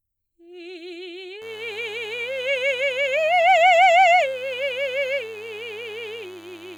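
From 1.42 s to the end, a steady, thin 100 Hz buzz rich in harmonics sits well below the music: DECT cordless phone buzz, rectified 10 ms radio bursts.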